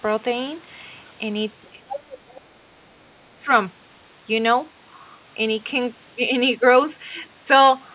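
At 1.62 to 1.69 s a very faint second voice slips in under the speech, about 35 dB down. This is the other side's voice leaking through, likely because the echo canceller left a trace of the far end's loudspeaker sound in the microphone signal.

From 1.71 to 2.15 s the speech dips and thins in pieces, falling by about 20 dB at its deepest, for about 300 ms in total. This is speech suppressed in double talk, likely because both sides spoke at once and the canceller turned down the near talker along with the echo. Within that stretch, at 1.88 to 2.00 s, the leaking voice is much clearer, only about 15 dB below the speech.

It returns at 2.28 to 2.46 s, faint at about 25 dB down. From 2.32 to 3.49 s the speech is pushed down harder, by about 30 dB at its deepest, for about a second in all, likely as the suppressor again clamps down during overlapping talk. Throughout, the narrowband G.711 call sound has nothing above 4 kHz.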